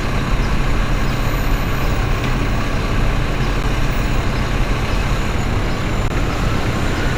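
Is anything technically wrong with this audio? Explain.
Yes, there are two dropouts of the underrun with held sample kind, at 3.63 s and from 6.08 to 6.10 s. The output buffer ran dry, and the converter held its last value. The waveform flatlines for about 11 ms and then 21 ms, which is 512 and 1024 samples. The sound stops almost silently, and roughly 10 ms and 20 ms of audio were lost. A spectrogram shows a blank column.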